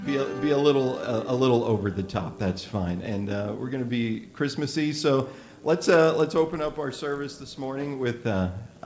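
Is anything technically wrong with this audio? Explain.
Yes. From 4.86 s to 7.66 s a steady 50 Hz buzz rides on the sound, rising and falling with it and absent in quiet moments. This comes from a resampler restarted on every block: the conversion from 24 kHz to 16 kHz was run separately on each 20 ms block, so each block edge was computed without its true neighbouring samples. That leaves a small error every 20 ms, and the repeating ticks merge into the buzz.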